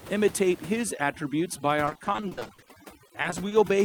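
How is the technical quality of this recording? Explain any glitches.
The technical quality is poor for most of the clip. Heavy processing and network problems degrade the speech from about 0.83 s to the end.

From 0.83 s to the end, the background drops to near silence with twinkling specks. This is overdone noise removal. The noise reducer was set so aggressively that it switched off individual frequency bands whenever they came close to its noise estimate. Softer parts of the speech fell under that threshold and were removed along with the room noise, which had sat about 17 dB below the speech before processing.

From 1.85 to 2.71 s, the speech becomes choppy, with pieces missing. This is repeated packet loss (robotic sound). A rapid run of short dropouts, the longest about 40 ms, hit this stretch. The receiver patched each one by extending the last sound, covering about 380 ms, or 44% of the span. 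About 300 ms of the original audio never arrived.

From 2.74 to 3.46 s, the speech runs slower at unchanged pitch, with drawn-out sounds. This is jitter buffer slow-down. The receiver's buffer was running low or had just raised its target delay, so it repeated small pitch periods and bits of pause to build up a reserve. That stretched the passage by about 59 ms and played it at about 93% speed. From 3.08 to 3.53 s, a second, milder run of packet loss overlaps the slow-down. Its gaps are no longer than 20 ms, and about 80 ms is concealed, 18% of the span, so the choppy texture returns briefly.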